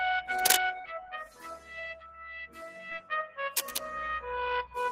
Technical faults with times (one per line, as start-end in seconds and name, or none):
0.00-4.92 noise suppressor applied to music or sounds
0.81-0.85 short concealed packet loss
1.25-3.11 sound cut by the noise suppressor
2.90-2.93 short concealed packet loss